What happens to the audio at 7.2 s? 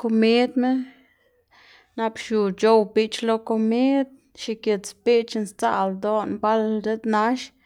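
Nothing goes wrong at 7.2 s: the speech plays through that moment intact, with no dropout, click or distortion.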